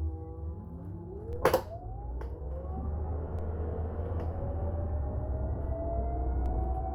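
At 1.33, 3.39 and 6.46 s, DC steps shift the waveform's zero line by about -36, -36 and -34 dBFS. Each gives a low thump that settles as a 2 Hz high-pass drains the offset. Unlike a dropout, the sound itself carries on intact.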